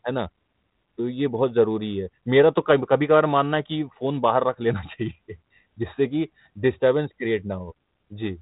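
Nothing here calls for attention; it's a speech clip carried over G.726 ADPCM at 32 kbit/s, so it's telephone-band with nothing above about 3.9 kHz, just as that codec runs when working normally.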